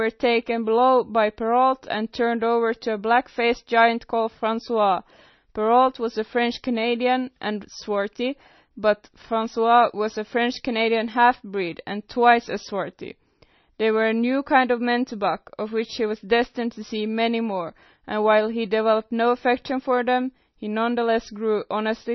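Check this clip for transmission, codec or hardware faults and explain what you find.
One codec fault runs through the whole speech clip. The sound is watery and swirly, with metallic chirps on s sounds and nothing above 5.9 kHz. This heavy damage is likely MP3 compression at a low bitrate, near 26 kbps, where the encoder trims the treble and lets weak frequency lines flicker between frames.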